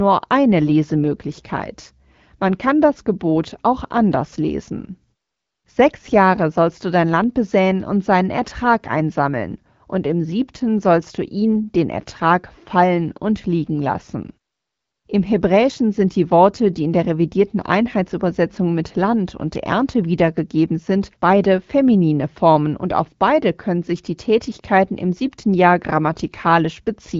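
Nothing technically wrong turns up in this speech recording, which comes across fine through the AMR wideband (HD Voice) path at 12.65 kbit/s.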